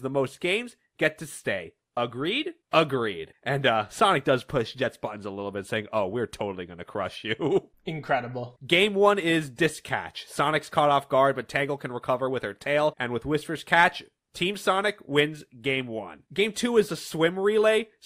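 No technical faults can be heard anywhere here.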